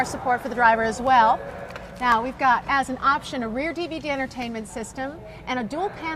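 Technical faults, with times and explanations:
1.07 s, 2.12 s and 4.42 s, dropped samples: the stream likely lost a fraction of a millisecond of samples each time, so the waveform jumps straight to a later value. Too brief to remove sound, each jump is a single sharp click.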